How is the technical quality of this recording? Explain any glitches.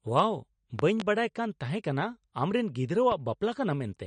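The recording has plainly audible coding damage throughout and two loud pop events.

Across the whole clip there is audible MP3 compression damage, and nothing is present above 9.6 kHz. The likely cause is a low-bitrate MP3 encode; the amount of damage fits a rate around 43 kbps. With few bits per frame, the encoder discards weaker frequency lines, which then switch on and off between frames, and it removes the treble above a fixed cut-off. The result is a watery, swirly texture on the speech, smeared consonant attacks, and a dull top end.

From 0.79 to 1.04 s there is a loud pop event containing two pops, peaking at roughly 15 dB above the speech. A second loud pop, a single one, falls between 3.12 and 3.15 s at roughly 10 dB above the speech. The likely cause is a sudden voltage step or pulse, from a connector, switch, static discharge or driver glitch, added to the signal. The downstream circuitry shapes that pulse, producing a sharp pop or thump on top of the audio while the speech continues underneath.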